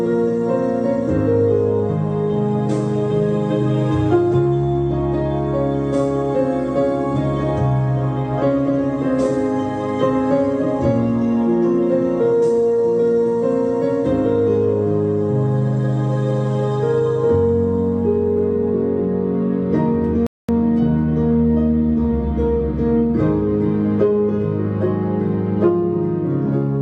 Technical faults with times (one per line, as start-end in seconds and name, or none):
20.27-20.49 rebuffering stall